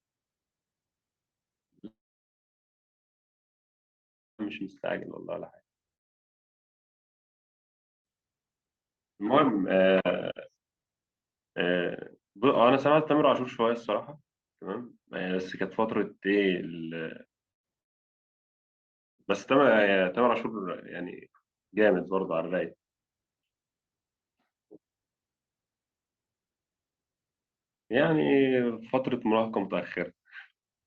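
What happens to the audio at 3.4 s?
At 3.4 s the speech is gone, in the middle of a silent gap from 1.87 to 4.41 s, likely a long network dropout. The receiver's brief fading buzz gives way to about 2.5 s of silence. Speech resumes mid-stream, missing content, unlike a short packet-loss glitch or a natural pause.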